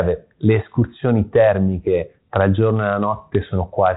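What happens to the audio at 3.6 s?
Nothing goes wrong at 3.6 s: the speech continues intact through that moment, carried by G.726 ADPCM at 32 kbit/s with only the light coding texture that rate leaves.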